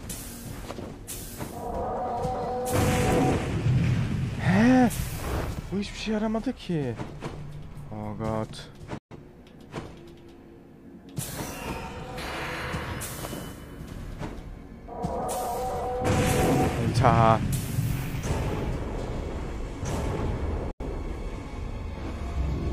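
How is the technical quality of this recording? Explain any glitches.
Two brief gaps spoil it, both digital broadcast dropouts. At 8.98 s the sound snaps to silence for roughly 130 ms, resuming around 9.16 s. At 20.71 s there's a shorter hole of about 85 ms, back by 20.85 s. Each time the receiver couldn't decode good frames, so it muted with a 3 ms fade until clean ones arrived. The gap lengths fit three and two lost frames, and whatever aired meanwhile is gone.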